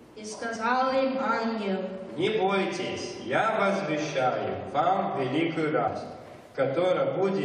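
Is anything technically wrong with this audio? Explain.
Yes. The audio has compressed frames skipped at three points: 0.55 s, 2.26 to 2.28 s, and 5.86 to 5.88 s. Whole coded frames never reached the output, so playback lurches forward: roughly 50 ms, about two frames, at the first two points, and roughly 150 ms, around seven frames, at the third. That fits a frame length near 23.2 ms. Overlap between adjacent frames turns each join into a short smeared blip rather than a sharp click.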